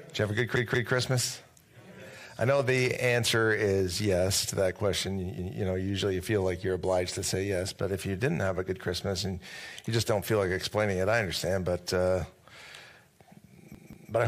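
At 0.56 to 0.93 s and again at 13.75 to 14.12 s, a repeated buffer occurs: new audio arrives late, so one roughly 186 ms chunk (fitting an 8192-sample buffer) plays three times with hard joins. It sounds like a stutter, not a dropout, because the same chunk repeats instead of going silent.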